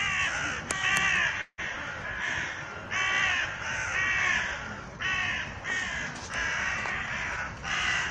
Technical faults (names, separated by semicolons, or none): call audio freeze; jitter buffer speed-up